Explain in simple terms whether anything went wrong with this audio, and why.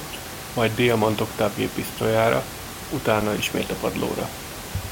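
Nothing stood out as wrong on listening: the speech comes through steadily, and the room noise beneath it is simply part of the place where it was recorded, not a problem with the system.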